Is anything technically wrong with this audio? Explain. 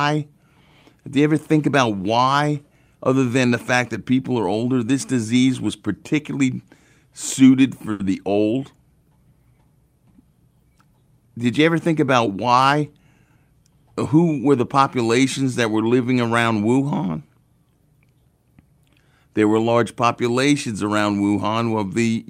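Yes, there are two faults. From 7.91 to 8.01 s, just after "disease was particularly suited" and before "the old", one sound hangs on for about 80 ms with a slight buzz or dip. This is a short stall from a late packet. The receiver stretched the last audio while waiting, so nothing is lost, but playback now runs about 80 ms later.

From 12.31 to 12.83 s, after "you ever think about", the speech sounds hurried but keeps its pitch, running at 110% speed. This is a jitter buffer speed-up. To shrink a backlog of queued audio, the receiver trimmed many tiny pitch-period slices, about 70 ms in total.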